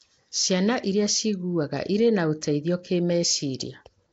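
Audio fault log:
throughout: Nellymoser compression, likely. The speech sounds smeared and underwater with a rough, hissy halo from noise-filled weak bands, and nothing above 7.8 kHz, which fits 32 kbps.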